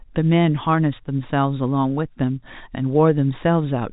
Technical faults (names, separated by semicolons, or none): none